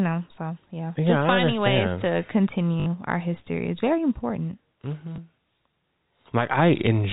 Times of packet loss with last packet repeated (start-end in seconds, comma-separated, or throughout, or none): 2.80-2.86, 5.16